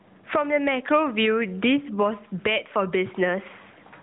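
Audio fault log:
Throughout: gain pumping. The level swings by roughly 20 dB, so loud and quiet passages sit unnaturally close together and the speech sounds squashed. The likely cause is input gain set far too high, with a fast limiter or compressor clamping down on each peak and releasing in the gaps. The narrowband phone-band sound beneath, capped near 4 kHz with only mild coding roughness, is a separate layer.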